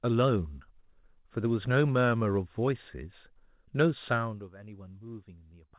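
Speech with nothing above 4 kHz, which fits a narrowband G.711 mu-law call path, and no technical faults can be heard in the signal.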